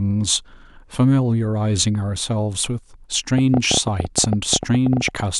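From 3.38 s to 5.21 s a train of clicks runs over the speech: about 20 similar sharp pulses at an uneven pace, averaging 11.6 per second, standing well above the speech level and audible as irregular ticking, likely from electrical interference or a faulty connection or power supply.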